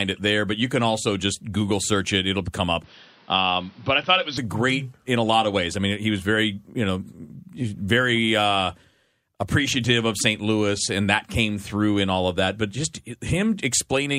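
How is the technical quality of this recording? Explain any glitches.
The recording has two audible glitches early on, both within the first five seconds of the speech.

At 2.46 s a corrupt frame was decoded: flipped bits misplaced energy, giving a brief blip that shows as a thin vertical smear on a spectrogram.

From 2.84 to 4.38 s, starting just before "a great in a", the sound turns dull and boxy, with nothing above 6 kHz and a faint noise bed about 30 dB down. The likely cause is the input switching to a poorer device. On a spectrogram, the upper band is abruptly empty, while the waveform level barely changes.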